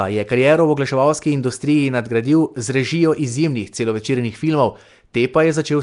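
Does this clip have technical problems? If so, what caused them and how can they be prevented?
Yes. Across the whole clip the speech carries a rough, hissy halo and a smeared, underwater quality, and nothing comes through above about 10.6 kHz. That points to Nellymoser compression, the likely culprit being Flash's old Asao microphone codec. It spends a fixed two bits per sample on short blocks, so weaker bands get zero bits and are patched with noise, which is the fizz you hear around the speech. The damage here is plainly audible and fits a bitrate around 44 kbps. To prevent it, record or re-export from a lossless source, or use a modern codec such as Opus, rather than routing audio through a Flash-era pipeline.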